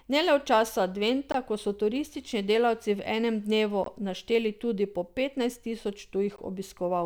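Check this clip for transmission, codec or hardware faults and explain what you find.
The speech carries one fault, a gap between chunks, heard three times.

At 1.32–1.34 s, 3.84–3.86 s and 6.36–6.38 s, 20 ms of silence is inserted at each join between roughly 2.5 s blocks. No speech is lost, but the flow stops abruptly. A waveform shows flat-line holes with hard edges, and a spectrogram shows narrow blank vertical stripes at a steady spacing.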